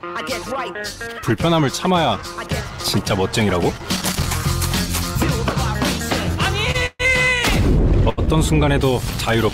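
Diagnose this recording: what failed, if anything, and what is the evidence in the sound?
A worn or dirty contact in the analogue wiring made and broke intermittently, chopping the signal into irregular crackle from 3.75 to 4.28 s and 9.10 to 9.35 s: loose connector crackle.

Late network packets emptied the jitter buffer, so the receiver held the last sound, 28 ms at 6.71 s and 80 ms at 8.09 to 8.19 s, a short stall with nothing lost.

A call audio freeze from 6.86 to 7.01 s stretches the sound into a fading buzz or hiss for about 133 ms, ending in brief silence, likely from packets delayed in the network.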